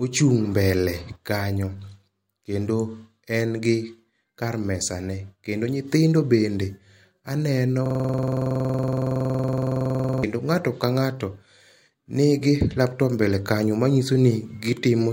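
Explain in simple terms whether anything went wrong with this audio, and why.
A system hang loop runs from 7.86 to 10.23 s. The computer stalled while the sound hardware kept replaying one 46 ms slice of speech, roughly 50 times, which fits a 2048-sample buffer. Repeating 21.5 times a second, it sounds like a rattling buzz.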